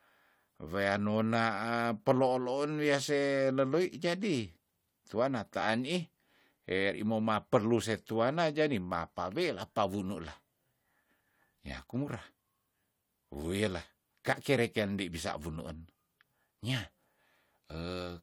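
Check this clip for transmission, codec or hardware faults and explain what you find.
I found no faults to explain in this clip.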